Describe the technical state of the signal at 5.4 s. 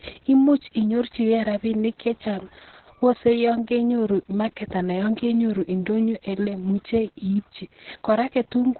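At 5.4 s the speech carries Opus voice compression, as it does for the whole clip. Nothing is present above about 4.2 kHz. That is narrowband coding, where the encoder discards the upper band entirely. The linear-prediction coder then rebuilds the voice from a coarsely quantised excitation. The result sounds muffled, hoarse and slightly robotic. The damage is heavy. It points to a very low bitrate, around 6 kbps.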